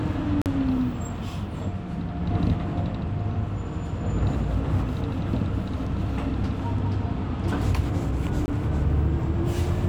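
Blocks of digital silence occur at 0.42 to 0.46 s (about 43 ms, which fits a 2048-sample buffer) and at 8.46 to 8.48 s (about 21 ms, fitting a 1024-sample buffer). The output likely went unfilled, so the sound drops abruptly to silence and returns around a brief hole.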